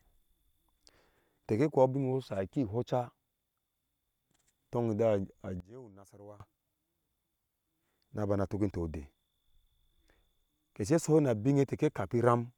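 One channel inverted, most likely a polarity flip on one side of the stereo pair, affects this speech recording from 5.60 to 6.40 s. When the two sides are combined to mono, the centred material they share cancels out, so the speech falls by about 22 dB and turns faint for those 0.8 seconds.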